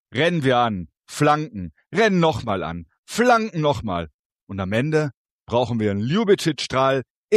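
At 2.44 s the level drops abruptly by about 6 dB and stays down for roughly 50 ms, recovering at 2.49 s. The sudden step in loudness, rather than a fade, gives a brief dip in the sound. This is most likely one channel dropping out: with one side of a stereo signal briefly lost, material shared by both channels halves in the mono sum, and anything carried only by the missing side vanishes for that interval.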